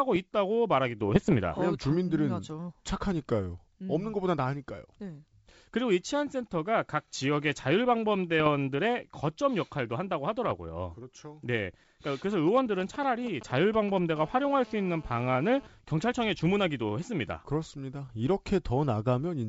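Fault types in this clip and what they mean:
Bit errors on an ADPCM link: Flipped bits on the coded link, and because the decoder adapts its step size and prediction from what it receives, each error keeps ringing for a few milliseconds. Here they come as three short rough, poppy bursts with brief level jumps, at 1.15 to 1.33 s, 8.40 to 8.49 s and 10.44 to 10.54 s, which suggests an error rate of a few tenths of a percent. The G.722 coding itself adds no more than faint damage.
GSM signalling bursts: A 2G handset close by is doing short bursts of radio chatter, the sort it does before a call or text, and the audio circuitry is rectifying them into sound. From 12.32 to 13.99 s you get that galloping dit-dit-dit of short 217 Hz buzzes. It sits about 15 dB under the speech.
GSM phone buzz: The same kind of interference, but now the phone is transmitting steadily as in a call, pulsing 217 times a second, and the rectified pulses come through as a hard, raspy buzz full of harmonics that has nothing to do with the speech. 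It runs steadily from 14.16 to 15.67 s, about 23 dB below the speech, so it's quieter than the signalling stretch.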